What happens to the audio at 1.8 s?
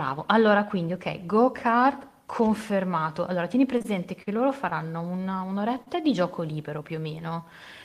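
Nothing goes wrong at 1.8 s; the speech runs on intact through that moment with no audible fault.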